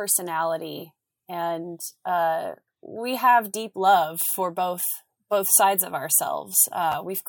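Around 4.33 to 4.35 s, right after "we have deep love" and before "both both sides of", there's a chunks out of order glitch: one 11.61 ms chunk lands a slot late, so the sound jumbles briefly. The same thing happens again at 6.92 to 6.94 s.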